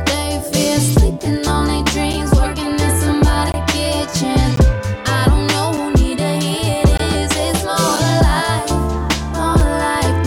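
The output buffer was likely repeatedly not filled in time, leaving blocks of digital silence of about 5 to 20 ms at 1.20, 2.13, 3.52, 4.56, 5.77, 6.97, 7.96 and 9.60 s, each heard as a click or brief hole in the audio.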